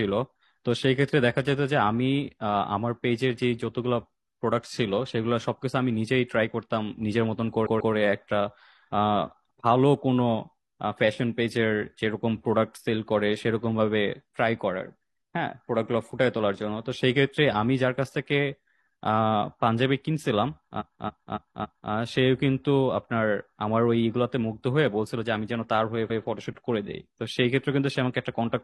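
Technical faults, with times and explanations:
7.62–7.90 s, 20.76–21.88 s, 26.06–26.20 s, repeated frames: runs of compressed frames were sent again, so the decoder replays the same block. A 139 ms block plays twice more, a 279 ms block four times more, then a 139 ms block once more. Each is heard as a stutter and lengthens the audio.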